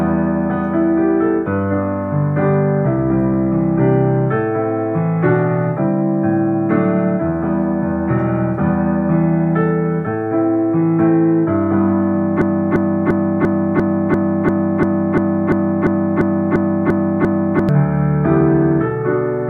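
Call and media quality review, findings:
Broken-record loop, 12.42–17.69 s: 0.35 s fragment repeats 15 times back to back; likely stalled player or stream resending last buffer, audio in that span lost.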